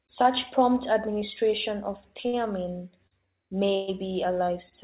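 A short stall from a late packet comes first at 2.28 s, right after "prompt administration of", and again at 3.07 s and 4.69 s. Each time a packet arrived late, the jitter buffer ran dry, and the receiver stretched the last sound to cover the wait, about 50 ms, 44 ms and 23 ms. The sound is held slightly too long, with a faint buzz, then resumes from the same point with nothing lost. The band-limited call sound, with nothing above 4 kHz, fits a G.711 mu-law path.

A call audio freeze runs from 3.75 s to 3.90 s. The last sound is drawn out for about 124 ms as a fading buzz that never drops to silence, and then the audio picks up exactly where it stopped, with no content missing. The likely cause is packets held up in transit long enough to empty the jitter buffer, forcing a longer concealment fill than the brief stalls.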